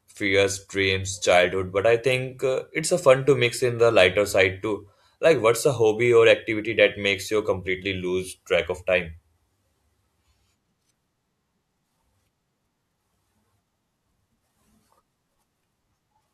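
A short stretch of speech, and nothing in it stands out as a technical fault, so there's nothing here to point to or explain.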